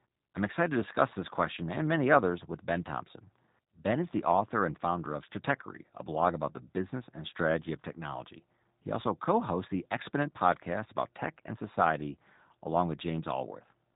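From start to finish the speech carries G.729 codec damage, plainly audible and consistent with the 8 kbit/s G.729A variant. Nothing above 3.8 kHz survives, so sibilants are dull, and rebuilding each frame from a filter, pitch predictor and sparse pulses leaves the voice rough and synthetic.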